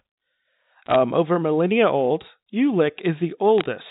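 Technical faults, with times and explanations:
0.86–0.96 s, bit errors on a digital phone line: a brief cluster of sharp ticks crackles over the speech for about 0.1 s. Flipped bits in the mu-law stream each corrupt a single sample, at a rate of roughly four per thousand bits. Hits on the upper bits, or on the sign of a loud sample, throw a sample far from its true value, which produces a click.
3.58–3.64 s, bit errors on a digital phone line: a shorter spray of ticks, about 0.06 s long, caused in the same way. Unlike packet loss or dropouts, nothing goes missing. The speech carries on unchanged beneath the clicks, and the sound keeps the usual 4 kHz telephone ceiling.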